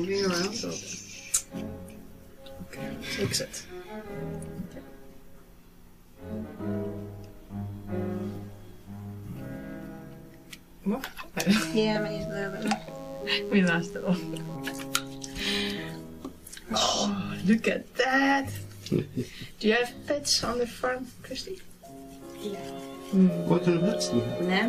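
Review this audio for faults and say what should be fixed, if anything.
DECT cordless phone buzz, 11.94 to 14.56 s: a nearby handset or base station emits radio bursts every 10 ms, rectified into a thin 100 Hz buzz roughly 30 dB below the signal. Keep DECT phones and base stations well away from microphones, cables and interfaces during recording.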